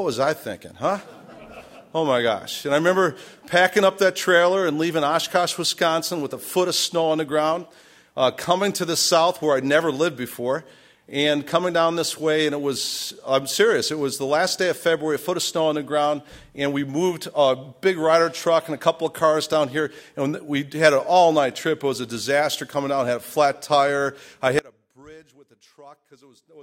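At 24.59 s the audio drops out abruptly and stays out to the end of the clip. What remains is not silence but a faint trace of the signal, roughly 25 dB below its normal level, likely because the path after the break stayed live while the main feed was lost. The switch is instant and the residue persists, which separates this audio dropout to a faint residue from a fade-out or a natural pause.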